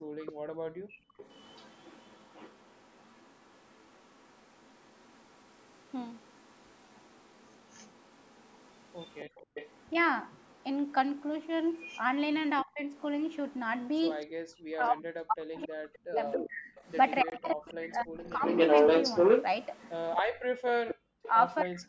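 At the very start of this speech recording, from 0 to 1.17 s, the echo canceller clamped down on the microphone while the loudspeaker was playing. That is background gated by the echo canceller: the room sound sinks by as much as about 36 dB for roughly a second in total, then returns as the canceller releases. Echo leak follows, most likely because a loudspeaker-side echo canceller failed to remove all of what its microphone picked up and sent the remainder back. A copy of the speech trails the original by 280 ms from 0.26 to 12.02 s and again from 12.94 to 14.26 s, faint at around 30 dB below the talker. From 15.64 to 21.81 s the same 280 ms echo comes back at roughly the level of the speech or a little above it, so it is plainly audible. Speech suppressed in double talk also appears, likely where the canceller could not tell the local talker from the loudspeaker echo while both were active and turned everything down. 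At 12.64 to 12.81 s there is a brief dip of around 20 dB. From 14.43 to 18.43 s the speech is pushed down by as much as 40 dB in pieces totalling about two seconds, and from 20.21 s to the end it drops by a similar depth. Inside that stretch, a block of digital silence runs from 17.30 to 17.32 s. For 20 ms the output falls silent with no fade, leaving a short hole, which points to an output buffer that was not filled in time. The call microphone processing band-limits the audio, leaving nothing above 8 kHz.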